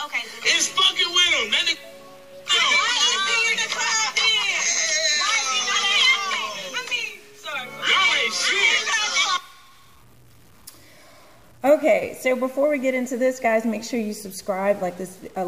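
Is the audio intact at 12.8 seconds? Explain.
No. At 12.8 seconds the audio carries a stuck bit, and the fault runs through the whole clip rather than starting or stopping there. The sound has a grainy noise riding on it. Quiet stretches fill with a gritty noise instead of falling silent. The likely cause is one data bit held fixed at 0 or 1. That offsets about half the values by a small step, about 45 dB below full scale, and flips with the sign of quiet signals.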